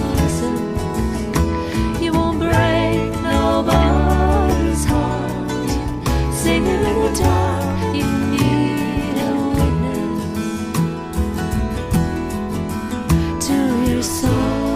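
Nothing goes wrong anywhere in this audio; there are no dropouts, glitches or other technical faults to point to at any moment.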